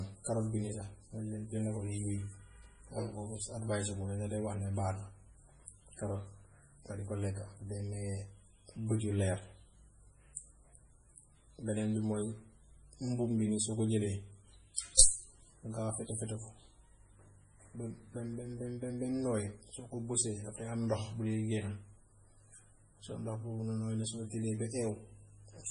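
Heavy MP3 compression runs throughout: the treble stops dead near 10.5 kHz, and a low bitrate likely starves the encoder, so the speech sounds watery, with swirling, chirpy sibilants unlike plain low-pass dullness.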